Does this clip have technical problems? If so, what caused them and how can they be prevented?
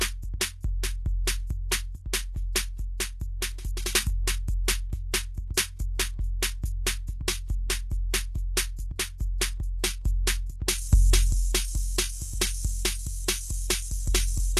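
Yes. Throughout the music the treble sounds gritty and metallic, and nothing is present above 12.3 kHz. This is likely HE-AAC compression, where the upper band is regenerated by copying lower bands upward, consistent with a very low bitrate around 16 kbps. A spectrogram would show a hard ceiling at 12.3 kHz and repeated, smeared harmonic patterns above the crossover. To prevent it, encode at a higher bitrate or with plain AAC so the treble is coded directly.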